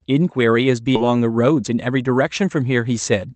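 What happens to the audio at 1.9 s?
At 1.9 s a jitter buffer speed-up is under way, running from 1.55 to 2.03 s. The overfilled buffer repeatedly cut pitch-period-length pieces, dropping around 40 ms in total. The speech plays about 7% faster at the same pitch and sounds briefly hurried.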